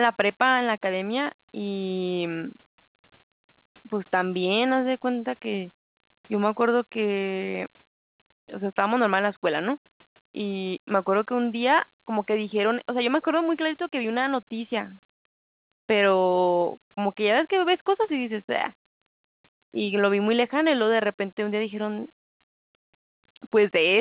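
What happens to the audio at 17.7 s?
Nothing goes wrong at 17.7 s; the speech carries on intact through that moment, with only the narrow, telephone-like band of the call path, which stops around 4 kHz.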